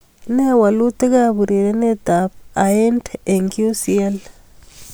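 No technical faults are audible anywhere in this speech.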